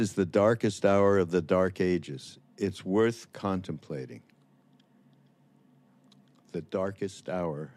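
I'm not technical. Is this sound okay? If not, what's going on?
Yes, this speech recording sounds fine, with no technical problems to hear. Nothing goes wrong at any point in it.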